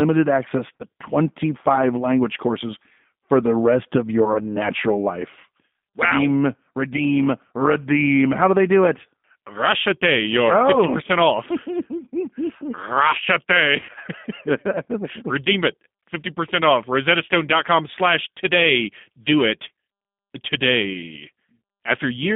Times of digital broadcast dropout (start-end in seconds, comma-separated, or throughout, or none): none